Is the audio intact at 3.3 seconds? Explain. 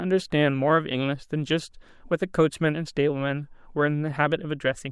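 Yes, at 3.3 seconds the audio is intact, with no fault present at that moment.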